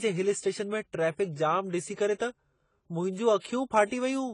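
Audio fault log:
Throughout, AAC compression: nothing above 10 kHz, with smeared, warbly sibilants rather than a clean low-pass roll-off, likely from AAC-LC coding at a low bitrate around 24 kbps.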